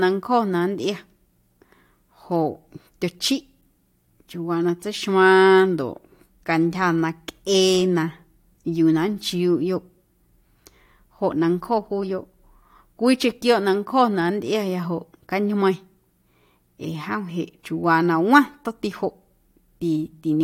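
A speech recording with nothing technically wrong with it.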